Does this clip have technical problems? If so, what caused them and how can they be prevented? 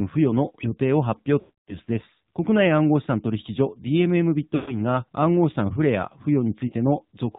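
Yes. The speech sounds buzzy and synthetic, with nothing above 4 kHz, a plainly audible AMR narrowband mobile codec sound. AMR-NB samples at 8 kHz and rebuilds the voice from a pitch predictor and a few pulses driving a vocal tract model. The degree of damage fits a low mode of around 7.4 kbps. Using a wideband or higher-rate codec mode, or recording locally rather than over a mobile call, prevents this.

At 1.40 to 1.77 s (280 ms) and 4.56 to 4.82 s (120 ms) the sound is drawn out and then fades away. At 6.68 to 6.74 s (40 ms) there is a brief dip. These are lost AMR speech frames: corrupted frames failed their checksum, so the decoder repeated the last good settings with falling gain. A stronger radio link or better error protection would prevent the losses.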